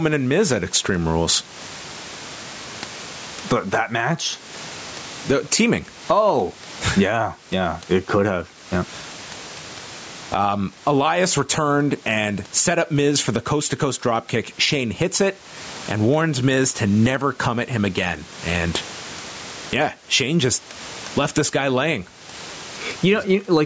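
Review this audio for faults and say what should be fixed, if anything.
Gain pumping runs through the whole recording. The level swings by roughly 20 dB. The speech sounds squashed, with loud and quiet passages pressed close together. The likely cause is an input gain set far too high for the microphone, so a fast limiter or compressor clamps down on every peak and releases in the gaps. To prevent it, lower the microphone input gain so the limiter rarely engages, and give the compressor a slower release.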